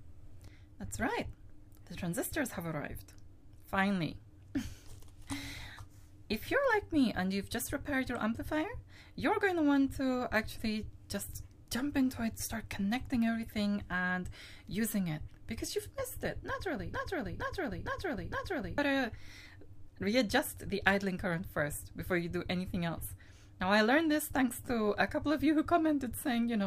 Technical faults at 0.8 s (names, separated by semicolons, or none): none